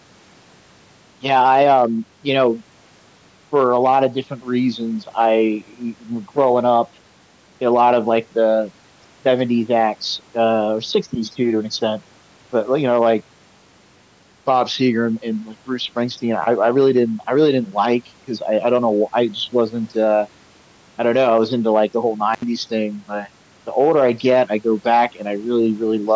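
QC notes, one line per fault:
22.34–22.44 s, intermittent contact: a loose connection opens for about 75 ms, so the speech drops out, with crackle at each edge and faint hiss between.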